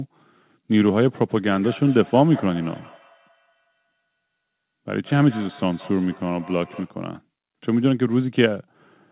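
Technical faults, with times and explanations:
1.5 to 6.99 s, feedback echo between two devices: a second device in the same room, on the same call, is playing this microphone's audio out of its speaker, and the microphone picks it up again. Neither echo canceller removes it, since each only subtracts what its own device plays. The speech returns roughly a fifth of a second later as a faint delayed copy, peaking about 21 dB below the speech, limited like the rest of the call to nothing above 4 kHz.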